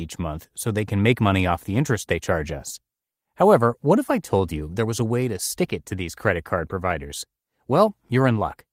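Nothing is technically wrong with this speech recording.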